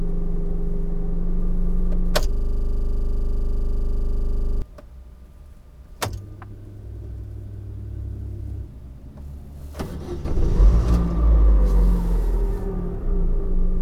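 From 2.33 to 4.62 s, a system hang loop takes over. The computer or driver stalled while the sound hardware kept replaying its ring buffer. One 40 ms slice repeats about 57 times. At 25 Hz it comes across as a rapid, rattling stutter.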